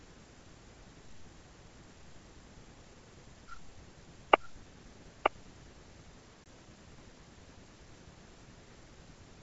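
From the start of the speech, a second copy of the same audio runs underneath the first. It trails by about a second and sits a few decibels lower. It is full-band and dry, with no decay or room colour. This is a doubled audio track. The likely cause is the signal being captured twice, once through a slower path, so two copies play out of step for the whole clip.

From 6.44 to 6.47 s there is a hard-edged gap of about 20 ms, which fits a single lost packet. This is packet loss on an ADPCM call. The missing stretch was filled with silence. The receiving decoder's adaptive predictor and step size then no longer matched the sender's. When the speech returns, it comes back with some slight distortion. It settles within some tens of milliseconds. The G.722 wideband coding carrying the call is clear up to about 7 kHz.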